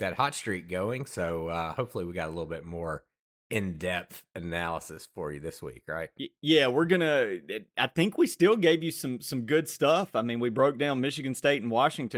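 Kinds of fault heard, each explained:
Nothing wrong turns up here; the speech comes through without any fault to point to.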